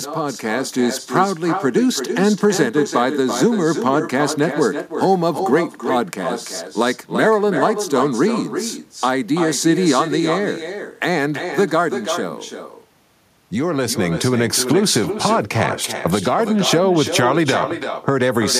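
From the very start and running the whole way through, there's echo with no canceller on this speech. The far end is playing the call out of a loudspeaker, their microphone is catching it, and nothing strips it out, so every phrase comes back after roughly a third of a second of round-trip delay. The returned copy sits only about 7 dB under the direct sound: a thinner shadow trailing each phrase.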